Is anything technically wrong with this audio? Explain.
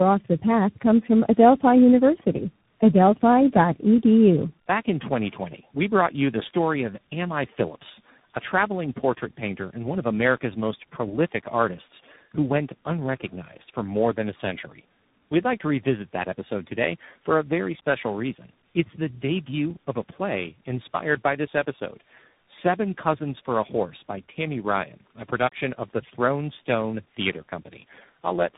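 Yes. Tandem speech coding runs throughout: the speech passes through about three successive speech codecs, likely G.729A, iLBC and CVSD, each re-encoding the previous one's damage. It sounds rough, muffled and warbly, with nothing above 3.8 kHz.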